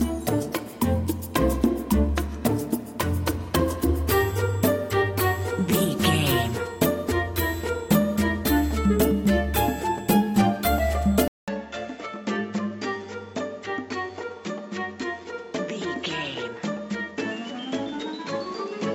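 At 11.28 s a 200 ms gap opens, then the sound turns duller and clearly quieter, with nothing above 7.6 kHz and a new background noise. The likely cause is the input switched to a poorer device; the silence and the fresh noise floor set it apart from a simple filter change.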